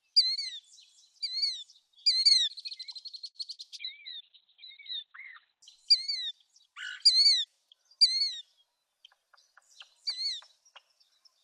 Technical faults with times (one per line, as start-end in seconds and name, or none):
3.55-3.61 short concealed packet loss
3.81-5.68 call bitrate drop